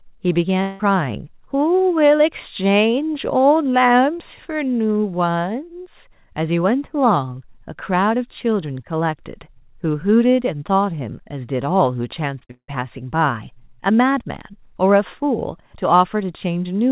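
Long network dropout at 0.62 to 0.81 s: the sound breaks off and a fading buzz, lasting about 0.17 s, carries the last sound across the gap. The likely cause is a stretch of lost audio that never arrives, so the return at 0.81 s skips what was missing.

Short concealed packet loss at 12.39 to 12.43 s and again at 12.45 to 12.51 s: about 20 ms, then 40 ms, of audio arrive too late, and the receiver fills each hole by extending the preceding sound, heard as a brief smear or wobble before the real signal blends back.

A second long network dropout follows at 12.51 to 12.70 s, with a fading fill and then about 80 ms of silence before the sound resumes, minus the lost portion. Throughout, the sound stops at 4 kHz, which fits a G.711 call codec at 64 kbps.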